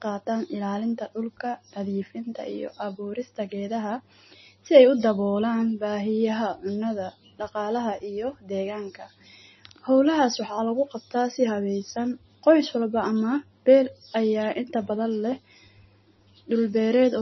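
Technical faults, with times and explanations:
Throughout, MP3 compression: the speech is dull above 5.9 kHz and has a heavy watery swirl, likely from an MP3 encoder starved at about 24 kbps, cutting the treble off and letting weak frequency detail flicker on and off between frames.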